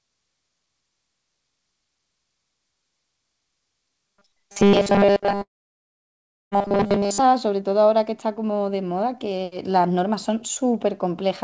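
This speech clip, carried over a call path whose codec leaves nothing above 8 kHz, has two faults. From 4.06 to 7.19 s, new audio most likely reached the player too rarely, so it kept replaying its last short buffer, which fits a buffer of about 5 ms, while most of the real signal went unplayed. That is robotic sound from repeated short buffers. The repetition stamps a rigid 200 Hz buzz onto the voice, which turns metallic and only loosely tracks the speech. Inside that stretch, from 5.42 to 6.53 s, a long network dropout is the likely cause of about 1.1 s of audio never arriving. The receiver papers over the gap with a fading continuation of the last sound, and then almost all of that interval falls silent before the speech resumes further on, with the lost portion simply gone.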